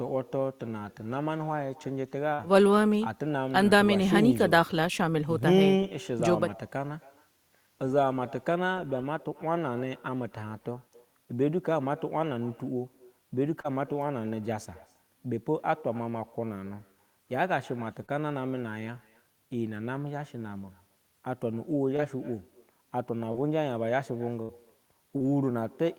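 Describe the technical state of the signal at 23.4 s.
At 23.4 s the signal is just past a short concealed packet loss, from 23.32 to 23.36 s. About 20 ms of audio failed to arrive at the decoder in time. The receiver covered 17 ms of that gap by extending the preceding sound, then blended back into the real stream. The result is a brief smear or wobble in the speech, and a short consonant there may drop out.

An echo with no canceller also runs through this moment, as it does across the whole clip. The far end plays the call through a loudspeaker. Its microphone picks that sound up again, and nothing strips it out. The speech therefore returns roughly a third of a second later, at about 23 dB below the original. It is a faint, thin shadow trailing each phrase.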